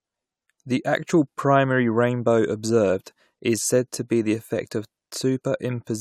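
Nothing technically wrong turns up anywhere in this speech recording, so there's no fault to point to and no time or cause to give.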